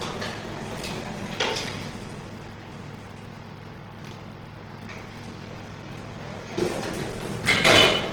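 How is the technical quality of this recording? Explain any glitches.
The quality is poor, with two faults running throughout.

Block size mismatch (padded), throughout: each block ends in a zero-filled gap, causing a 43.1 Hz buzz. Playback runs at 0.861 times speed, timbre unchanged. This fits 1024-sample reads.

Opus compression, throughout: tones sound noisy, rough and grainy, while the range still reaches about 20.2 kHz. The likely cause is Opus in its music mode at a low bitrate, around 16 kbps.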